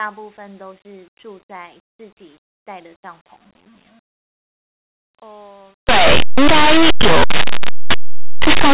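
From 5.89 s to the end, linear audio is read as companded. Plain 8-bit samples get expanded as mu-law codes, so the speech turns into harsh, very loud distortion.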